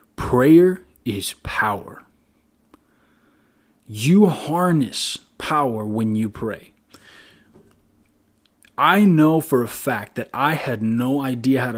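Nothing here stands out as a technical fault; the speech has simply been through Opus voice compression at 24 kbps in its hybrid fullband mode, which leaves only a light trace on the sound.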